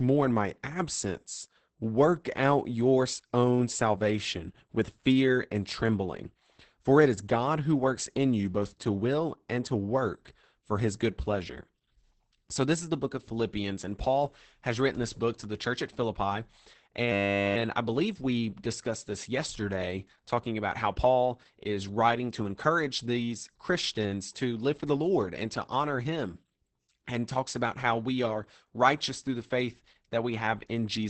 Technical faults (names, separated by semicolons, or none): Opus voice compression; system hang loop